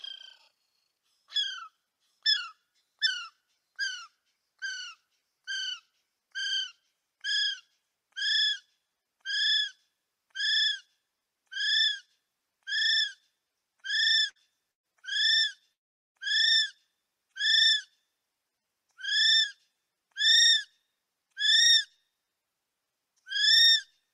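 The audio has two bursts of packet loss close together. At 14.29 s a gap of about 60 ms is bridged by a continuation of the last sound. At 14.71 s about 120 ms goes missing, and the filled-in sound fades away. Both times the audio resumes further on. At 15.73 s the sound holds as a fading tail, then drops to near silence until 16.17 s. About 0.4 s of audio never returns. The likely cause is a long network dropout.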